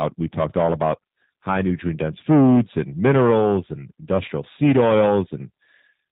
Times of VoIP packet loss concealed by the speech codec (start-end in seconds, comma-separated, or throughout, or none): 4.26-4.29